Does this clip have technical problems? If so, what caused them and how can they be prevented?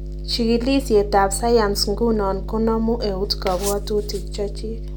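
Yes, there's mains hum running under the speech for the whole clip: a steady 50 Hz drone, fairly loud at roughly 10 dB below the speech. That's the power line leaking into the signal, likely through a ground loop or a transformer sitting near the cabling. To prevent it, keep everything on one grounded outlet, use balanced cables or a ground-lift DI, and route audio lines away from power supplies.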